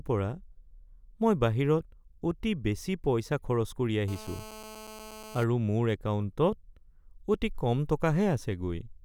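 From 4.08 s to 5.44 s a hard, raspy buzz, steady and rich in harmonics, runs at 217 Hz about 16 dB below the speech. This is GSM phone buzz: a nearby 2G phone on a call transmits 217 bursts a second, which the audio circuitry rectifies.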